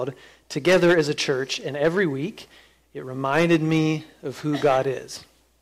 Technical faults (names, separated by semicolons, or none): hard clipping